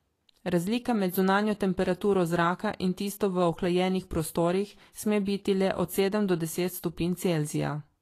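Across the whole speech clip the treble sounds hissy and grainy, with a plainly audible roughness and a smeared edge on consonant onsets, and nothing reaches above 14.2 kHz. The likely cause is Vorbis compression at a low setting, consistent with a bitrate of around 36 kbps. At that rate the encoder lowers its cut-off and quantises the high-frequency residue so coarsely that fine detail is replaced by noise of similar energy.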